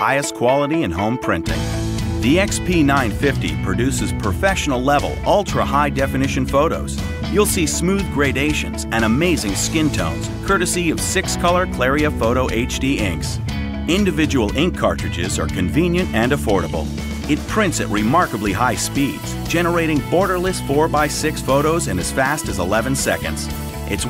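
No technical faults can be heard anywhere in this audio.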